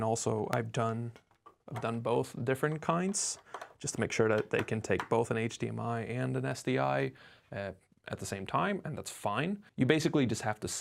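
Overlap between stream segments shows up at 0.53 s and again at 6.52 s, each time as a brief click or tiny skip in the audio. The spacing of about 6 s matches the length of the stream segments. Two neighbouring segments carry time stamps that overlap, so the player drops about 5 ms it wrongly treats as duplicated. The waveform then jumps straight across the missing stretch, which makes the discontinuity audible.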